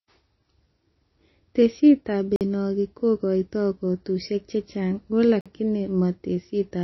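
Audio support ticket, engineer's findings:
Likely MP3 compression at a starved bitrate, around 24 kbps; treble cut off at 5.8 kHz, watery swirling speech and smeared attacks throughout.

Gap between chunks, 3 s chunks; 48 ms silent holes at 2.36 s and 5.41 s.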